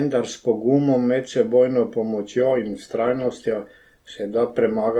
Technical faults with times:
2.38-4.99 adaptive stream at a lower bitrate

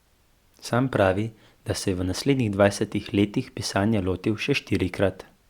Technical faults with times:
none

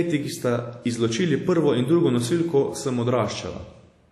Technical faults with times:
0.00-4.12 WMA compression

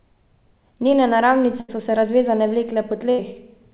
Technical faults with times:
1.60-1.70 burst of packet loss
3.10-3.20 burst of packet loss

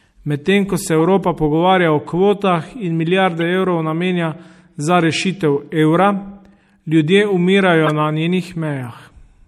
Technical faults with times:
0.00-9.48 MP3 compression
0.99 corrupt frame decoded
3.41 corrupt frame decoded
7.84-7.89 corrupt frame decoded

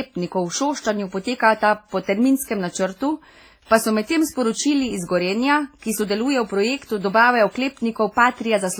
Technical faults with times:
0.00-8.80 WMA compression
3.66-3.71 pre-echo

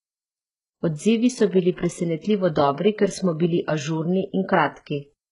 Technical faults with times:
0.00-5.32 HE-AAC compression

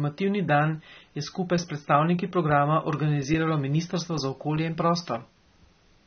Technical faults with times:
0.00-6.06 AAC compression

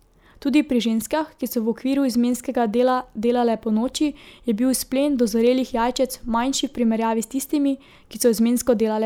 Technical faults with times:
none

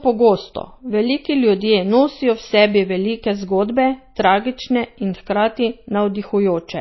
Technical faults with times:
0.00-6.81 low-bitrate audio saved at a high bitrate

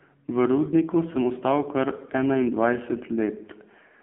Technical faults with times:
0.00-4.02 AMR narrowband mobile codec

